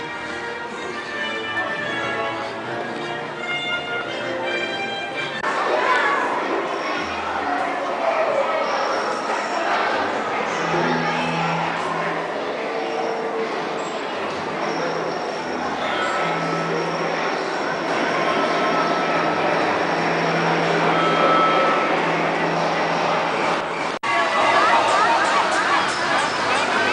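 From 17.88 s to the end, the audio has a doubled audio track. A second full-band copy trails the first by roughly 0.4 s, at about the same level. It starts abruptly and carries no decay or room colour. The likely cause is a second, slower capture path mixed in.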